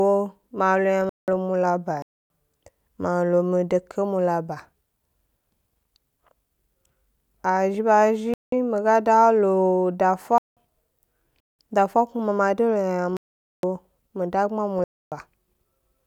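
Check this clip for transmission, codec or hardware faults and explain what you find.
Seven abrupt silent holes cut into the speech: 1.02–1.36 s, 2.02–2.25 s (just after "mula ba"), 8.34–8.52 s (just before "mi ga"), 10.38–10.57 s, 11.40–11.59 s, 13.10–13.63 s and 14.79–15.12 s (just after "mi dagbma"). These are corrupt frames muted: bit errors made the decoder reject whole compressed frames, and the player substituted silence. The gaps run from about 0.19 to 0.54 s, which fits frames of roughly 90 ms each. The surrounding timing stays intact.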